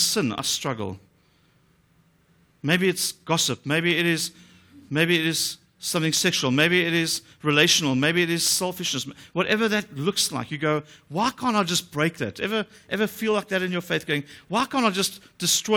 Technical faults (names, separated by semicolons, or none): block size mismatch (truncated)